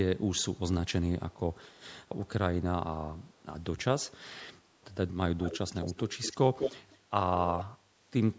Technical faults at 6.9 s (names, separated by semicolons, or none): echo leak